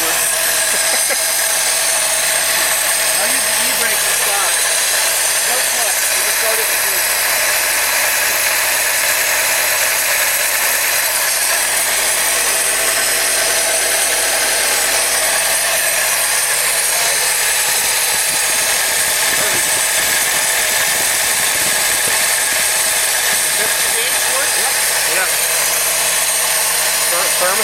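At about 4.50 s there's a repeated buffer: new audio didn't arrive in time, so one 5.8 ms chunk, which fits a 256-sample buffer, played three extra times back to back. Being that short, it comes across as a quick buzzy click rather than a stutter, with nothing noticeably missing afterwards.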